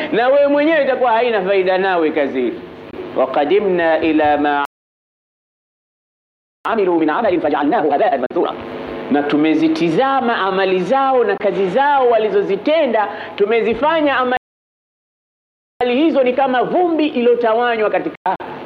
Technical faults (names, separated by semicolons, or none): Bluetooth dropout; playback stall; time-compressed catch-up